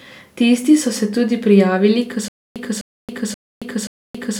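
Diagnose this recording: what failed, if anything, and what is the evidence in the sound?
Stutter with silent gaps from 2.28 s to the end: right after "se tudi prijavili k", a 0.25 s fragment of the speech repeats four times, each time followed by about 0.27 s of dead digital silence, giving an even cycle of roughly 0.53 s. This is likely a playback or streaming stall: on each retry the player re-sent its last buffered fragment and then ran dry, so the speech that should have followed is lost.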